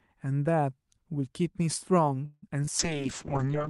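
A speech recording carrying three kinds of call transport fault, all clustered in its final stretch. From 2.25 to 2.44 s there is what is likely a call audio freeze: packets stalled in transit and the jitter buffer ran dry, so the receiver stretched the last sound into a fading buzz for about 170 ms, ending in roughly 20 ms of silence. When delivery resumes the speech picks up exactly where it left off, with nothing lost, but everything after it now runs about 170 ms late. Right after, at 2.50–2.53 s and again at 2.65–2.69 s, comes short concealed packet loss. Each time about 20 ms of audio never reached the decoder in time, and the receiver papered over the hole by extrapolating from the preceding sound before blending back into real audio. These are heard as brief smears or wobbles rather than clean gaps. Finally, from 2.80 s to the end, a call bitrate drop sets in. The bandwidth estimate collapsed and the Opus encoder was pushed from 64 kbps down to 6 kbps, which forced it to code far more coarsely and narrow the audio band from 20 kHz to 8 kHz. 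The remaining speech turns rough, watery or muffled, losing its top-end sibilance and air.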